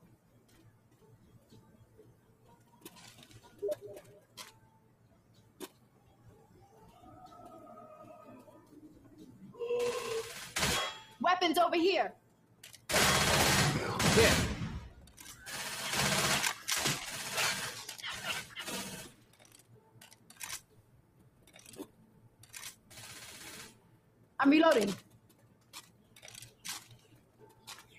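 A noise suppressor built for speech runs through the whole clip, though this material is not speech. It treats steady tones and tails as noise and pulls them down. The level swings by roughly 20 dB, so the sound pumps and thins.

The sound is cut by the noise suppressor at 0.0 to 2.85 s, 4.2 to 6.68 s, 12.16 to 12.88 s, 14.98 to 15.18 s, 19.09 to 22.91 s, 23.73 to 24.38 s, 25.03 to 26.17 s and 26.98 to 27.93 s. Held sound sinks by about 8 dB, or about 7 dB near 15 s. Decays end early.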